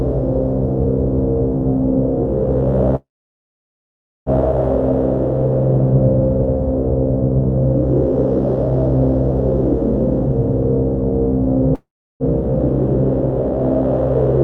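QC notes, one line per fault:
2.95–4.29 s and 11.75–12.23 s, call audio freeze: the audio stalls and its last moment is stretched into a short fading fill, then drops to silence for about 1.2 s and 0.35 s respectively before resuming exactly where it stopped. The pattern is likely a jitter buffer running dry while packets were delayed. Nothing is lost, but the clip runs about 1.31 s and then 0.45 s later after each stall.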